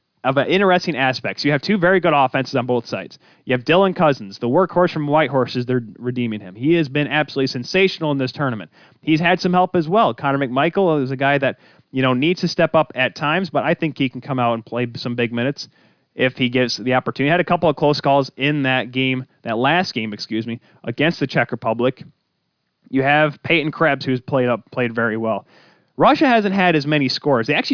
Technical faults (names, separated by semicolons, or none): none